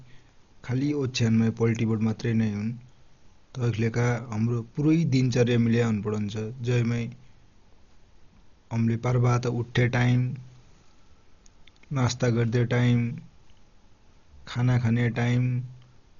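From start to finish the speech sounds dull and muffled, with nothing above about 7 kHz, and a rough, fluttering noise clings to the voiced sounds. This heavy damage is likely Dolby Digital compression at a very low bitrate, consistent with about 40 kbps. Starved of bits, the encoder cuts off the top of the band and sends many frequency lines with no detail at all, and the decoder fills those gaps with dither noise, producing the grainy flutter.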